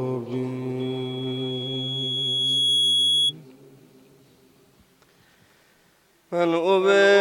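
From 0.79 s to 3.34 s there's a loudspeaker feedback squeal: a mic is hearing its own speaker, and the loop gain tops one at 3.3 kHz. That tone swells over roughly two seconds into a piercing whistle, ending up about 5 dB louder than the sound underneath.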